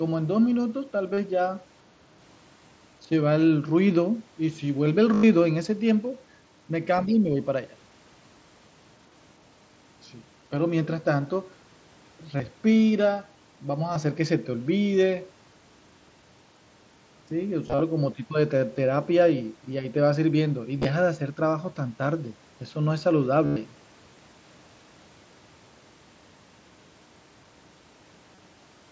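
Speech over a wideband mSBC Bluetooth headset link, band-limited to 8 kHz, with concealed Bluetooth headset packet loss at 1.14 to 1.18, 5.14 to 5.23, 12.37 to 12.40, 13.94, 17.67 to 17.80, 20.79 to 20.85, 23.46 to 23.56 and 28.35 to 28.38 s. Lost packets are filled by repeating recent waveform. The longer gaps near 5.1 and 23.5 s, about 90 to 105 ms, buzz at full level before a small warble. The short single losses are nearly hidden. From 7.05 to 7.38 s the speech dips by about 5 dB, likely the echo canceller suppressing speech in double talk. Inside that dip, from 7.06 to 7.13 s, a faint second voice sits about 25 dB below the speech. That is likely the other side's voice leaking through from the loudspeaker.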